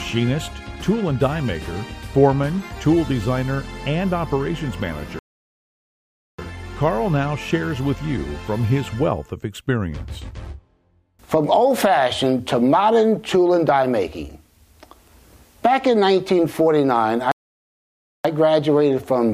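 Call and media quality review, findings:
Playback stall, 5.19–6.39 s and 17.32–18.25 s: output drops to silence mid-flow for about 1.19 s, then 0.93 s. Likely player buffer underrun or blocked playback thread; audio resumes after refill.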